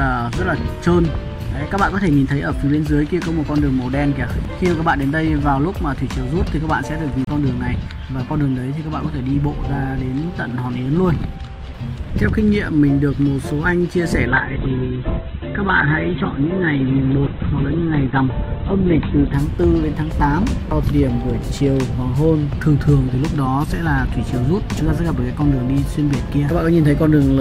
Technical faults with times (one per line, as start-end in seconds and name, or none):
7.25-7.27 CD skip
14.28-19.44 call bitrate drop